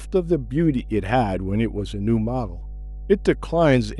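Mains hum runs underneath the speech from start to finish, a steady low tone at 50 Hz with a few low harmonics above it. It sits only about 15 dB below the speech. The fixed frequency and constant level point to power-line interference, most plausibly a ground loop or a transformer near the recording chain leaking into the signal.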